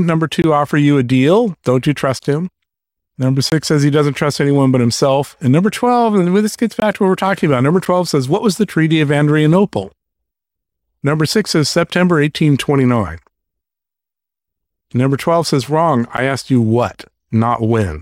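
Speech with six blocks of digital silence: 0.42–0.44 s before "offer you a deal", 2.19 s, 3.50–3.52 s before "says he doesn't trust", 6.80–6.82 s, 7.85 s, and 16.17 s before "asked you". Each gap of about 9 or 20 ms is probably an unfilled output buffer. The shorter gaps are heard as ticks or dips, and each shows as a flat silent stretch with vertical broadband streaks at its edges.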